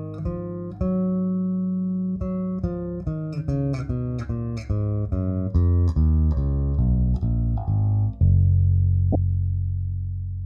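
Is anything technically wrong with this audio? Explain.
Yes. At 9.12 to 9.15 s there is a corrupt frame decoded: damaged bits in a single compressed frame were played anyway, throwing about -10 dBFS of energy into wrong frequencies for 30 ms. It sounds like a brief chirp or blip, and shows as an isolated vertical smear on a spectrogram and a short spike in the waveform.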